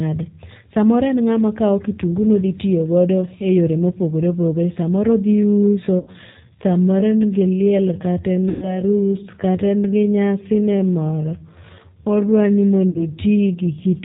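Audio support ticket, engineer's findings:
G.729 codec on the call leg, consistent with 8 kbit/s G.729A: speech rebuilt from filter, pitch and sparse pulses, nothing above 4 kHz. Voice sounds band-limited, rough and synthetic throughout.

VoIP packet loss concealed by the speech codec at 5.99–6.11 s, 8.49–8.81 s and 12.90–13.03 s, with roughly 80 ms, 130 ms and 50 ms of audio missing. Decoder extrapolates its last pitch and filter and lowers the gain frame by frame, producing fading buzzy tone or coloured noise that stays weak or distorted briefly after packets resume. The 8.49 s gap is the longest.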